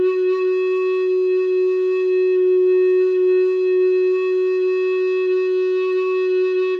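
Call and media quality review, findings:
No faults found in the music clip. Nothing to flag for follow-up on this ticket.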